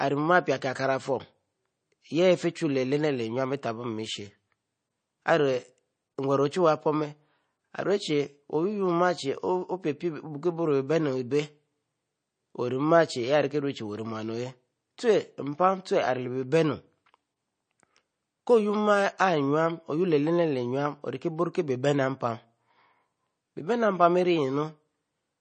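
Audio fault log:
Throughout, MP3 compression: the speech sounds watery and swirly, with a dull top end where nothing is heard above 9 kHz, and the s sounds come out metallic and chirpy while consonant onsets blur. The cause is likely heavy MP3 encoding at a low bitrate, around 33 kbps: short of bits, the encoder cuts the treble at a fixed point and drops weak frequency components that flicker in and out between frames.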